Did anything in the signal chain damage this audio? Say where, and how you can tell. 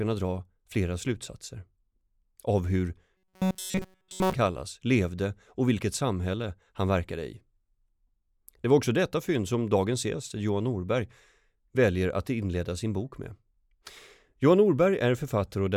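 Yes. From 3.16 to 4.33 s, between "av hur" and "kallas levde och vilket", the speech turns into a rigid metallic buzz fixed at 188 Hz that only loosely tracks the syllables, and it covers the whole stretch. This is robotic sound from repeated short buffers, likely at the driver or buffer stage. New audio arrived too slowly, so a block of about 5.3 ms was replayed over and over while real audio was skipped. That repetition sets the buzz rate.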